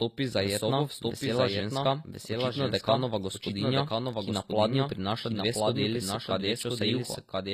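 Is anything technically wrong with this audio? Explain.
Yes, two faults run through the whole clip.

A doubled audio track is present from start to finish: a second, full-band copy of the speech trails about a second behind, roughly 5 dB quieter, with no room colour or decay. It sounds like a dry, overlapping echo, likely from a second capture path or an edit holding two misaligned copies.

HE-AAC compression is also audible throughout. The codec keeps the lower spectrum and rebuilds the treble by copying lower bands upward, so upper harmonics don't line up. Here s sounds turn gritty and lispy, nothing sits above 14.9 kHz, and the damage points to a bitrate around 24 kbps.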